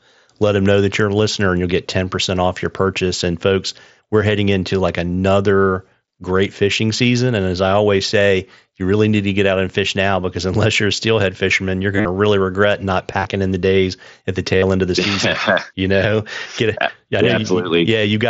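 Concealed Bluetooth headset packet loss hits three times. At 11.96 to 12.05 s, after "steelhead fisherman you're", about 75 ms goes missing within 90 ms. The phone patches each gap by repeating the best-matching recent stretch of waveform. The longest run is 45 ms, heard as a buzzy held tone with a warble as real sound returns. At 13.11 to 13.25 s, 52.5 ms is lost in shorter bits, before "in the days at". At 14.6 s, 37.5 ms is lost before "end of the season". The mSBC link carries the sound, band-limited to 8 kHz.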